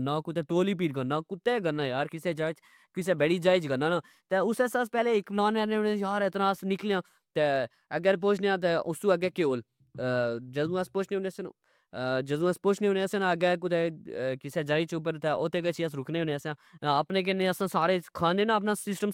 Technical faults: none

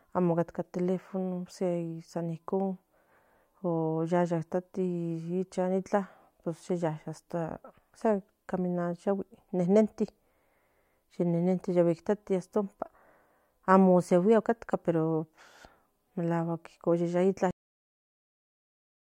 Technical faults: cut-off end

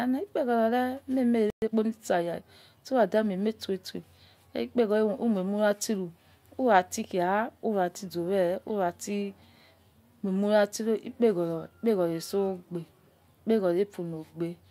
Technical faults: playback stall; time-compressed catch-up

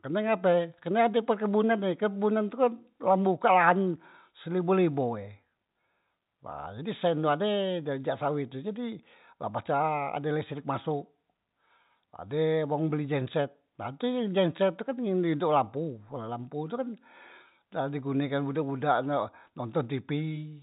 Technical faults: none

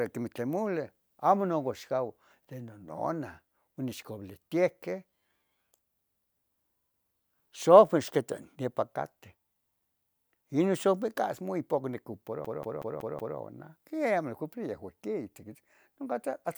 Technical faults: system hang loop

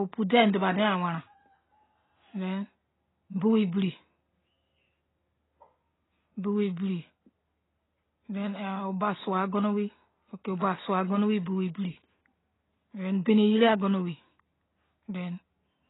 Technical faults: AAC compression

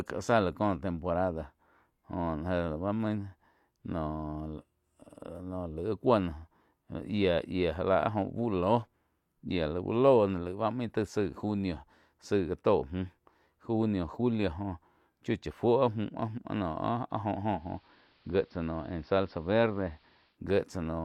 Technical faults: digital radio blending to analogue

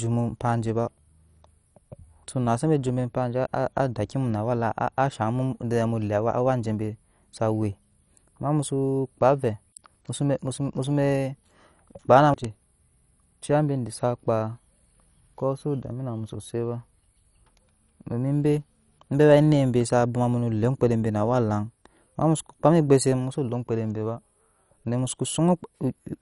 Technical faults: MP2 compression

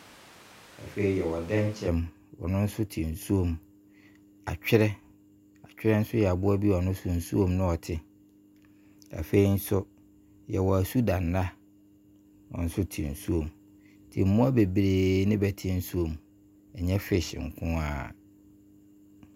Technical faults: switch to a distant microphone

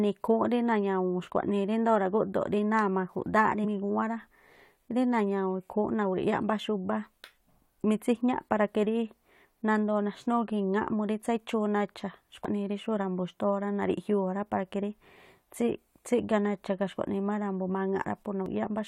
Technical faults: damaged data in a compressed stream

